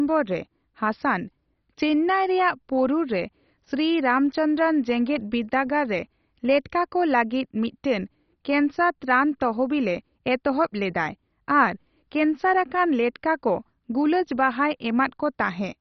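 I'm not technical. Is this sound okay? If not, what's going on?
No, the whole clip sounds muffled and gurgly, with nothing above about 6.1 kHz. That's likely MP2 compression squeezed hard, switching off the upper bands.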